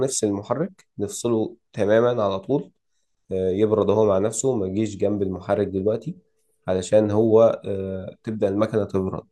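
No technical faults can be heard in the speech, and the signal holds steady for the whole clip.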